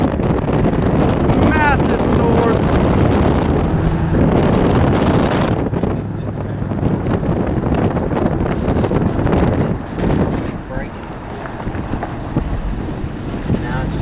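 Nothing in the signal points to a technical problem at any point.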